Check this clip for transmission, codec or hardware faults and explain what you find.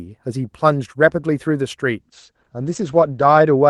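One transmission fault is present. A call bitrate drop begins at 2.02 s and lasts to the end of the clip. The encoder was squeezed from a rate pointing to about 32 kbps down to about 12 kbps, coding the speech more coarsely, and the audio band narrowed from 12 kHz to 8 kHz. The result is rougher, more muffled speech, bottoming out for the final 1.38 s.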